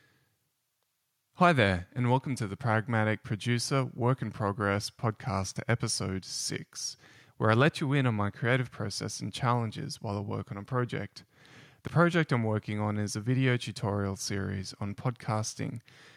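Audio missing between chunks at 11.87 s: roughly 30 ms drops out and the sides butt together, likely lost while switching between 6-second recording chunks.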